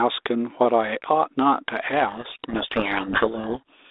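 From 2.08 s to the end of the clip, the speech is buried under harsh, grinding distortion. This is a codec payload misread: the decoder takes the G.726 code words with their bits in the wrong order, so the sample differences are decoded wrongly. The G.726 link itself runs at 32 kbit/s on a 300 Hz to 3.7 kHz telephone band with only light coding damage.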